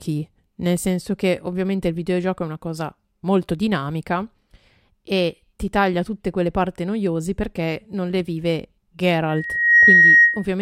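At 9.29 s a loudspeaker feedback squeal takes over and runs until 10.47 s. A microphone is picking up the speaker it drives, and at 1.9 kHz the loop gain has passed unity, so that frequency feeds on itself. It swells over about half a second to roughly 10 dB above the speech. On a spectrogram it shows as a bright, thickening horizontal line at 1.9 kHz, and the waveform's envelope balloons accordingly.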